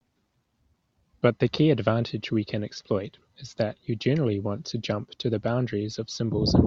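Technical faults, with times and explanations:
No technical faults can be heard in this speech.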